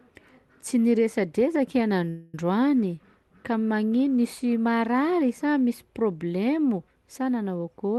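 At 2.09 s the speech stops moving forward and a short, fading buzz takes its place until 2.35 s. That is a call audio freeze of about 240 ms. Packets were likely held up in transit and the jitter buffer ran dry. The receiver stretched the last sound to fill the wait. When the audio resumes, it picks up where it stopped. Nothing is lost, but everything after runs about 240 ms later. Above it all, the top end stops near 12 kHz, which fits an Opus call codec.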